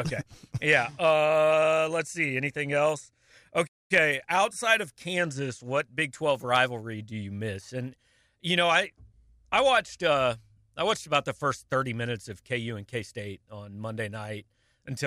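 A likely playback stall interrupts this speech recording: the player appears to have run short of buffered data, or had its output thread held up, and so delivered nothing to the output for a moment. The result is a hard gap of silence from 3.67 s to 3.91 s, about 225 ms long, cutting the speech off mid-flow before sound returns once the player recovers.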